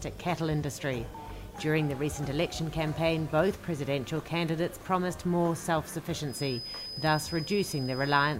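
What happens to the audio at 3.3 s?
Nothing goes wrong at 3.3 s; the audio plays through that moment intact, with no dropout, click or distortion.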